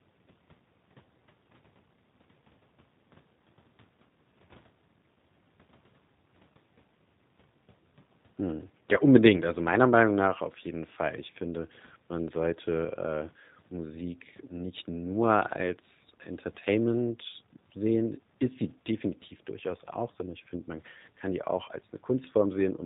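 A speech recording carries G.729 codec damage throughout. Everything above 4 kHz is gone, and the buzzy, synthetic roughness of pulse-rebuilt excitation fits 8 kbit/s G.729A rather than a plain telephone band-limit.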